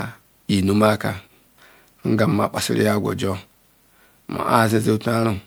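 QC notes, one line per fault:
Throughout: generation loss. The speech has a swirly, hollow quality with smeared consonant attacks, more damage than a single MP3 pass at 128 kbit/s would leave. This is likely repeated lossy coding, around four passes, each requantising on a shifted frame grid so that noise and spectral gaps pile up. Single-pass low-bitrate coding sounds dull or warbly in a fixed way, whereas this layered smearing points to stacked encodes.
2.58 s: dropped buffer (overrun). Just before "ya agwa oto" the sound jumps forward, with no gap of silence. Roughly 20 ms of audio is missing, likely because the samples were not read before the hardware overwrote them, leaving the two sides spliced directly. A dropout would leave a gap of silence, but here the sound skips ahead, and that is what marks an overrun.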